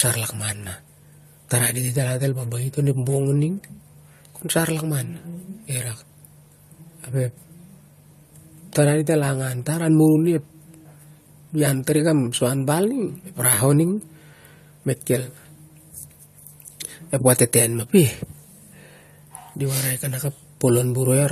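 Transcoding between lossy codecs runs throughout: nothing above 14.1 kHz, two layers of compression artefacts stacked, likely AAC re-encoded as MP3.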